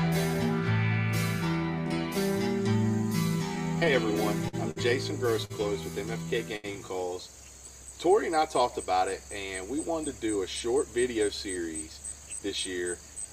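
From 3.55 to 6.76 s there's a run of repeated stalls, a stutter: packets kept arriving late, the jitter buffer ran dry seven times, and the receiver stretched the last sound to bridge each hole, the longest about 76 ms. The audio drags and hiccups, with nothing actually lost.

Then from 11.57 to 12.40 s you get a jitter buffer speed-up. Too much audio had piled up, so the receiver trimmed tiny pitch-period slices in quick succession, about a tenth of a second in all. It plays roughly 10% fast at unchanged pitch and feels a bit rushed.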